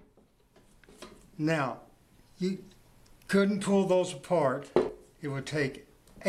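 At 0.98 s and again at 4.89 s the sound skips forward, dropping roughly 50 ms each time, likely audio missing between 2-second chunks during handover.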